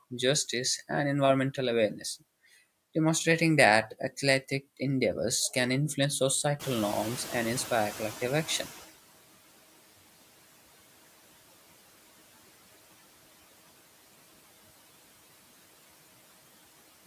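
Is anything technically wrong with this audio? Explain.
Yes. Throughout the speech, the background noise dips between phrases and swells beneath them. These are noise suppressor artifacts from per-band, frame-by-frame gain cuts of about 17 dB. From 6.59 to 8.95 s, a sudden surge of room noise just before 6.6 s comes through with less reduction at first, then fades over 2.36 s. This is the noise suppressor catching up as its noise estimate adapts.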